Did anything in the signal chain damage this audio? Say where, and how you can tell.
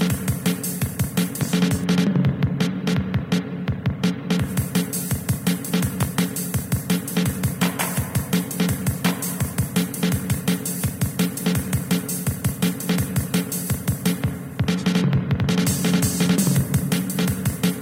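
Yes. A voltage step most likely entered the analogue wiring, from a plug being seated, a switch or a static discharge. That is a loud pop: the step adds its own pulse on top of the signal, and the circuits after it shape that pulse. Two pops land between 6.03 and 6.21 s, peaking about 15 dB above the surrounding level, while the sound underneath continues without interruption.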